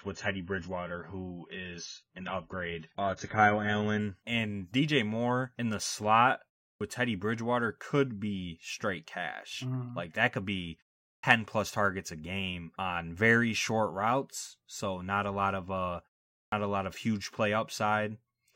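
A speech clip where the first 4.0 s sound dull and smeared, with nothing above about 7.1 kHz. That's an adaptive stream starting at a low bitrate. The sound fits a player opening on something like a 16 kbit/s AAC rendition, then stepping up to around 96 kbit/s once it has sized up the connection, and the quality jumps with no gap. Then there are three clipped starts after a pause. At 6.74 s, right after "in the slot", at 11.17 s, just after "that could be" and leading into "plus targets a game", and at 16.46 s, after "a lot of uh" and before "a lot of huge", roughly 65 ms of the onset is lost each time. Those pauses run only 0.32 to 0.46 s, and the output device apparently drops into sleep in them and has to wake back up, swallowing the first sounds.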